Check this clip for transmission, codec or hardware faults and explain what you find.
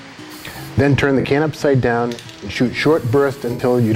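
AAC frame loss with concealment occurs at 1.20 to 1.25 s and 3.52 to 3.60 s. The decoder rebuilt the missing 43 ms and 64 ms, about two and three frames, from the last good spectrum, so each gap becomes a brief smeared, noisy, phasey patch in the sound.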